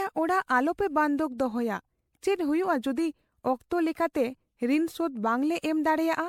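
Across the whole speech clip there is generation loss: a swirly, hollow smear with softened attacks, likely from around seven successive MP3 encodes at a rate that points to 96 kbit/s. One pass at that rate would sound cleaner; the stacked damage is what sets it apart.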